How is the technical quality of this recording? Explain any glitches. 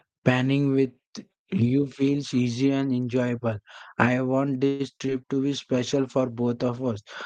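The speech has audible call-transport faults clustered in the second half, all heard through an Opus call path whose coding noise and roughly 12 kHz top end are present throughout.

From 4.67 to 4.82 s there is a call audio freeze. The last sound is stretched into a fading buzz for about 0.12 s, likely because packets were held up and the jitter buffer ran dry. When packets resumed, playback continued from where it stopped, adding a delay without losing audio.

At 4.99 s and again at 5.06 s there is short concealed packet loss. About 20 ms went missing each time, and the decoder extrapolated from the preceding sound before crossfading back. Each one sounds like a brief smear or wobble in the speech, with the two events falling almost on top of each other.

From 5.44 to 7.04 s a call bitrate drop makes the speech rougher and more watery. The change points to the encoder rate halving from about 32 to 16 kbps after the bandwidth estimate fell. 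It stays at the reduced rate for roughly 1.5 s of that span.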